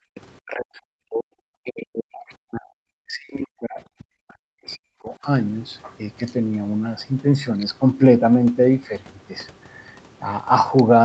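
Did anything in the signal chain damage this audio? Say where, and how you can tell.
Yes. Call processing, specifically the echo canceller, damaged it. From 0.0 to 0.15 s the background is gated: the room noise drops by about 40 dB and then returns. On a spectrogram the noise floor goes dark across all bands, and the waveform shows near-silence before recovering.

Right after, from 0.15 to 0.21 s, a faint second voice, well below the main speech, briefly comes through. This is likely the other side's voice leaking through from the loudspeaker past the echo canceller. A spectrogram shows thin harmonic traces unrelated to the main talker.

Four stretches of speech are pulled down, by up to around 40 dB: 0.43–1.3 s, 1.61–2.74 s, 3.01–3.79 s and 3.96–5.24 s. This is likely speech suppressed in double talk. The waveform envelope collapses in chunks, and the spectrogram loses energy abruptly. 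The 8 kHz top edge comes from the Opus path.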